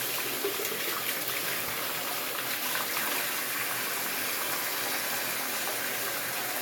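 No technical faults can be heard anywhere in the recording: the signal stays continuous and stable, with no interruptions or disturbances at any point.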